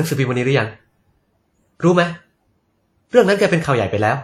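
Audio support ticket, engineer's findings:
Likely a low-bitrate WMA compression stage in the chain, throughout the clip. Transform codec starved for bits, consistent with a stream around 48 kbps, so quantisation noise spreads over long blocks and weak spectral lines are dropped. Result on the speech: plainly audible washy, ringing texture, hiss that pumps with level, and nothing above 15 kHz.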